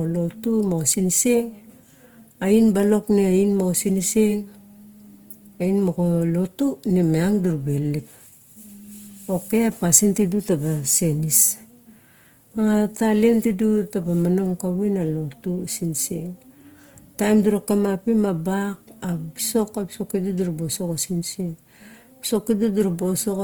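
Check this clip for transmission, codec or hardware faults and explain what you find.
One codec fault runs through the whole speech clip. Opus compression: the sound is grainy and rough, and bands are filled with noise. Likely cause: Opus in music mode at a low rate, fitting about 24 kbps, with content still reaching 20.2 kHz.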